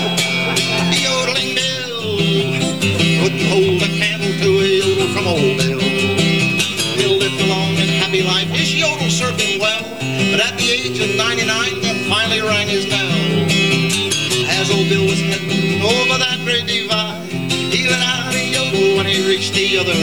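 From start to finish the sound carries grainy distortion that rises and falls with it, fading tails sputter or cut to silence, and the error sits around 30 dB down, likely low bit depth without dither from truncation to 7 bits. Unlike steady hiss, it vanishes when the signal does.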